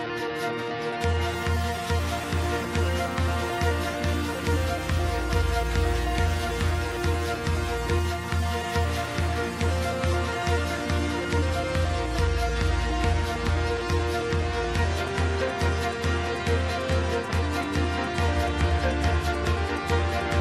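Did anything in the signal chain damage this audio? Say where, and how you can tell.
No, no signal-chain damage heard.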